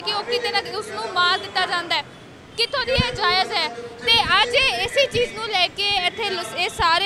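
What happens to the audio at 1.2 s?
Nothing goes wrong at 1.2 s; the audio plays through that moment intact, with no dropout, click or distortion.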